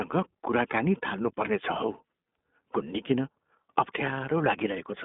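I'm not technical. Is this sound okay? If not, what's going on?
No. The recording has passed through the iLBC codec, a phone-call compression system built for internet calls. It only keeps the sound between about 200 Hz and 3.6 kHz, so the speech sounds thin and boxed-in, like a phone line. It also rebuilds the voice in 20 ms chunks from a simplified model, which leaves it plainly rough and slightly synthetic from start to finish.

At about 1.86 to 1.89 s there are lost iLBC frames. One 20 ms chunk of the call never arrived, and the decoder covered the gap by repeating the last bit of voice it had, mixed with noise. You hear it as a very brief held, faintly buzzy sound. Because each iLBC chunk is decoded independently, the voice recovers right after the gap.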